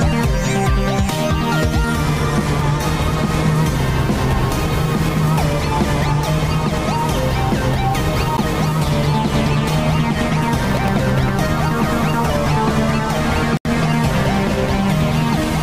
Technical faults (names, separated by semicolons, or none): block of digital silence; processor overload crackle